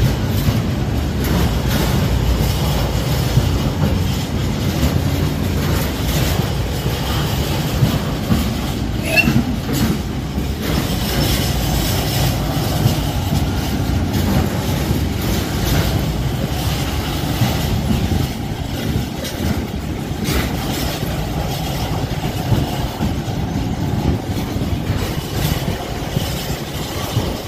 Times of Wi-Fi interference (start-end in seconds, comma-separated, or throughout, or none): none